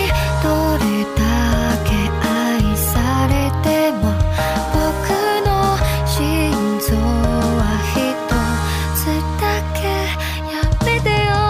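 Linear timecode from a neighbouring track or cable leaks into the audio path from 4.09 to 9.97 s. This timecode bleed, running at 30 frames per second, adds a steady chirping warble near 1 and 2 kHz, roughly 30 dB below the sound.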